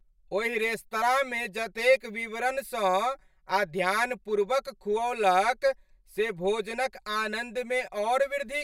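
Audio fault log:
throughout, channel delay (comb filtering): the speech has a hollow, phasey colour that never changes, the sound of one channel arriving roughly 5 ms after the other before the two are summed to mono. Content common to both channels cancels at regularly spaced frequencies, with the first notch near 100 Hz and further notches every 200 Hz or so above it. The result is a hollow, thinned tone with a fixed comb of gaps across the spectrum.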